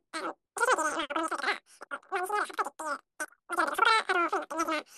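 Speech played with a wrong sample rate throughout: it runs 3.0 times too fast and 19 semitones high, which fits 16 kHz audio played at 48 kHz. A spectrogram shows harmonics and formants stretched threefold upward, and the waveform's syllable envelopes are squeezed to a third of their length.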